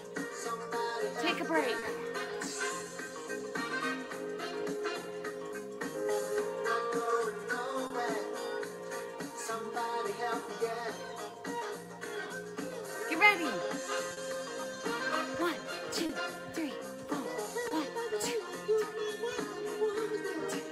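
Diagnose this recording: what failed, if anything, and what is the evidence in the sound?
The failure is at the network stage: clock drift between sender and receiver. The sender's clock runs roughly 3 percent slow against the receiver's. Audio arrives more slowly than it is played out, so the jitter buffer keeps draining. Its effects are heard throughout. The tempo feels faintly unsteady, and the buffer runs dry several times. The receiver works continuously to compensate. It never settles.

The receiver's response is repeated timing corrections. From 0.68 to 13.57 s, and again from 15.43 to 20.69 s, it stretches the audio. It repeats short pieces, which works out to playback at about 98 percent speed. The first stretch gains roughly a third of a second. The second gains about a tenth. The edits all go the same way but are unevenly spaced. They come through as small hiccups and a slightly dragging pace.

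The drift also causes short stalls from late packets. They occur at 1.79, 7.87, 14.13, 16.06 and 17.68 s. At each point a packet was not there when due, and the buffer ran empty. The receiver held the last sound for 30 ms, or 40 ms at 14.13 s, then resumed where it left off. Nothing is lost. Each stall sounds like a brief smear, with a slight buzz or dip.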